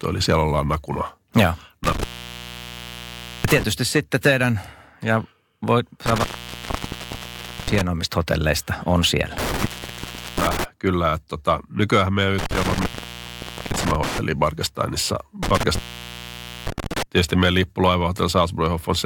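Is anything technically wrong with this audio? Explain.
Yes. The speech has an intermittent contact fault, with the signal dropping out five times: 1.84–3.63 s (after "siellä ollaan nakuna ja", resuming at "sitten teidän ja voi"), 6.06–7.81 s, 9.38–10.64 s (after "hotelleista on siellä"), 12.38–14.18 s, and 15.43–17.03 s (ending before "tietysti meidän"). A loose connector opens, breaking the path for roughly 0.7 to 1.4 s each time. The sound cuts out with crackle at the edges and faint hiss remains while the line is open.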